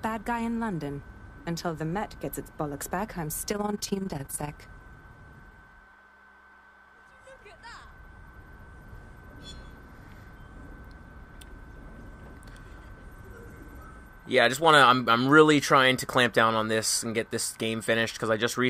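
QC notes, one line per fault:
3.53 to 4.51 s, overlap-add ripple. For just under a second, the level pulses up and down about 20 times a second, with a swing of about 11 dB. It sounds like a fast, rough flutter, close to a rough tremolo. The audio was split into windowed frames and rebuilt. The frame overlaps do not add up to a steady gain. So each frame boundary leaves a dip or bump, repeating at the frame rate.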